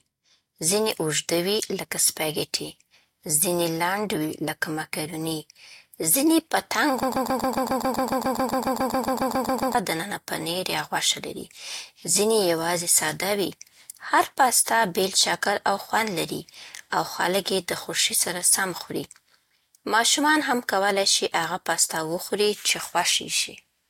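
From 7.03 to 9.75 s, a broken-record loop repeats one 0.14 s fragment twenty times. A stalled player likely resent it. Speech resumes at "دننه پنیر یا غوښه".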